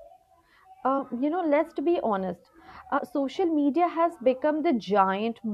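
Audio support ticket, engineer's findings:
Compressed frames skipped: 0.98 s just before "you know let's be", and 2.97–3.00 s between "know let's be honest" and "social media has". Roughly one and two 23.2 ms frames left out, skipping about 20 ms and 50 ms of speech.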